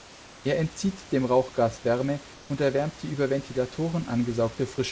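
Comfort noise in place of the background appears from 2.34 to 2.50 s in this speech clip, just before "erwärmt die über": for 160 ms the room's real background gives way to a steady, featureless hiss about 2 dB quieter, likely because discontinuous transmission paused sending and the receiver synthesised filler noise.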